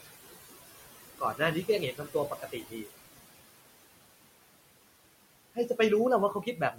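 It's a speech clip with a noise suppressor working hard on it, and you can hear the noise suppressor artifacts throughout. The room noise, only about 11 dB under the voice, gets pulled down by about 20 dB between phrases and comes back up underneath them. Some speech gets cut by the noise suppressor too, because it treats quiet parts of the voice as background. Right at the start, 0.01 to 0.11 s, the onset is swallowed by up to about 17 dB. The same happens from 1.19 to 1.41 s (about 16 dB). The worst stretch is 1.92 to 2.89 s, where well over half a second of quiet speech drops by as much as about 20 dB. From 6.34 s to the end, the trailing sounds fade by up to about 11 dB.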